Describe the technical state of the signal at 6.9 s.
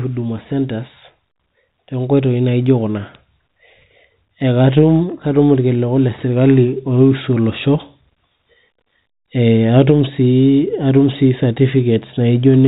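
At 6.9 s the speech is intact, with nothing wrong beyond the narrow band of the G.711 telephone coding it passes through.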